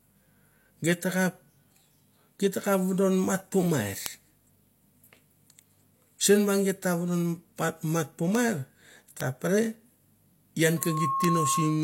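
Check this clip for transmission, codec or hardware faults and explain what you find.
Two faults are present in this speech clip: isolated bit error spikes and a loudspeaker feedback squeal at the end.

Bit error spikes at 2.62, 4.06, 6.83, 8.35, 9.21 and 11.24 s: a flipped bit throws one or two samples far off, giving a sharp, broadband tick unrelated to the speech.

Loudspeaker feedback squeal from 10.77 s to the end: the microphone-to-speaker loop exceeds unity gain at 1.1 kHz, so a tone swells over roughly a third of a second to about speech level.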